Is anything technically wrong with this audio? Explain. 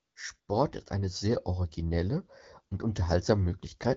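Yes. AMR comfort noise appears twice, from 0.01 to 0.15 s and from 0.39 to 0.47 s, the second gap ending just before "ist eine sehr originelle". In each pause the phone decided nobody was talking and stopped sending speech frames, for 140 ms and then 80 ms, so the receiver generated synthetic noise from a rough level-and-spectrum sketch. The real background drops out and a smooth, uniform hiss switches in and back out at the edges of these spans. The speech carries the light coding character of AMR wideband, which points to the 12.65 kbit/s mode.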